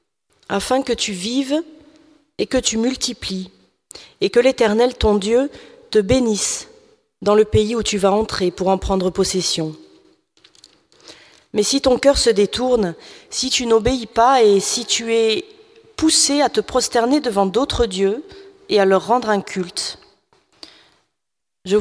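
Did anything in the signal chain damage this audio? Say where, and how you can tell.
No, nothing in the signal chain stood out as having damaged this audio on listening.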